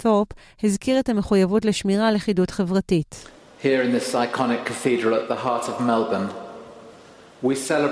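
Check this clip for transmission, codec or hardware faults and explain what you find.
Nothing stood out on listening to this clip.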